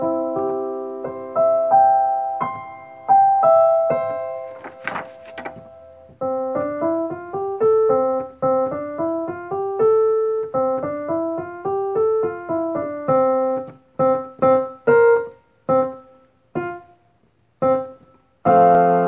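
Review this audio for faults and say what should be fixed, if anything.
Nothing needs fixing; no faults were found here.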